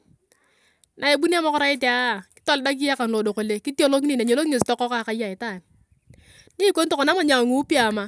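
No technical faults can be heard anywhere in the recording.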